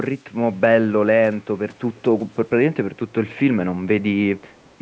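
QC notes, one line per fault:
1.95–2.01 s and 4.57–4.75 s, echo leak: faint, short scraps of the speech come back about 255 ms late, sitting very low, roughly 35 to 40 dB under the talker. That's likely a far-end speakerphone whose echo canceller let a bit of its mic pickup slip back down the line.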